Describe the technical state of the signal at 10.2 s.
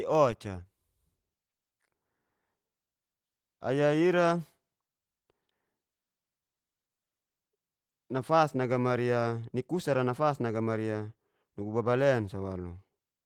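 At 10.2 s the speech is intact, with no fault at that moment; the Opus voice compression in the path is doing its normal job there, leaving only light coding wear on the sound.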